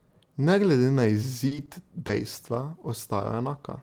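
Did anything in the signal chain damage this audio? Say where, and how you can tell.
Yes. Two short stalls from a late packet, at 1.47 to 1.53 s and 1.66 to 1.70 s, point to the network and jitter buffer. The receiver held the last sound for about 40 ms and then 20 ms until the packet arrived, then resumed with no gap. The added delay shows as drawn-out speech with a faint buzz.

A short concealed packet loss at 2.07 to 2.11 s is also a network fault. About 20 ms of speech never arrived. The decoder filled the hole by extending the preceding sound and blending back, so there is a brief smear where that audio should be.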